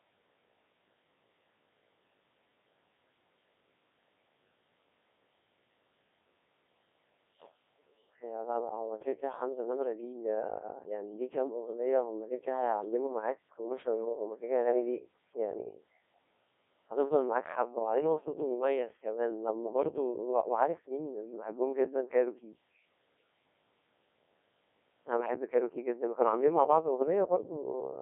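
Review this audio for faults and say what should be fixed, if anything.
The whole recording has passed through a Codec 2 vocoder, and the damage is heavy: the speech sounds buzzy and robotic because the decoder rebuilds it from sine waves driven by pitch, voicing and a coarse spectral envelope, discarding the real waveform. The sound fits roughly a 1.6 kbit/s mode, confined to a 300 Hz to 3.6 kHz band. A spectrogram shows smeared, blocky harmonics with nothing above 3.6 kHz. The waveform looks regular but unlike the original shape. Capture or transmit over a wideband waveform codec instead of a low-rate vocoder.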